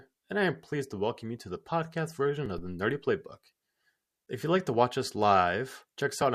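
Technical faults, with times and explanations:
2.58 to 3.04 s, phantom power thump: a deep thump that dies away with a decay of about 100 ms. A supply switched on or off on the live input sends a sudden voltage step through the coupling capacitors, which the input turns into a low-frequency pulse.
4.26 s, gap between stream segments: a hard-edged hole of silence about 10 ms long. The time stamps of two adjoining segments fail to meet, so the player fills the gap with silence; the segments are 6 seconds long, and no audio is lost.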